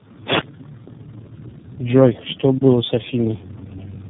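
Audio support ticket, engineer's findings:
Tandem speech coding, throughout. Rough, muffled, warbly speech, no content above 3.7 kHz. Three speech coders in a row, ending in iLBC. Each re-encodes the previous one's degraded output. Unlike a single narrowband codec, the artefacts stack.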